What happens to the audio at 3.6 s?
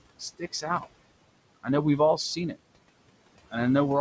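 At 3.6 s you're hearing the noise suppressor artifacts that run through the whole clip. The suppressor is pulling down bands it judges to be steady room noise by about 21 dB, so the noise drops away between phrases and swells back under the speech.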